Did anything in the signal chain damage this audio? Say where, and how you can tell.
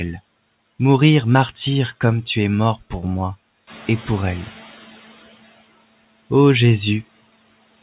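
Yes, at the call-processing stage: the noise suppressor was catching up. The room noise jumps about 12 dB at around 3.5 s. From 3.67 s to 4.99 s it passes through with too little reduction, then sinks by about 9 dB as the suppressor's noise estimate adapts over 1.32 s. Unlike gate pumping, the noise doesn't switch with the speech. It fades once, steadily. The narrowband call path is audible too, with nothing above 4 kHz.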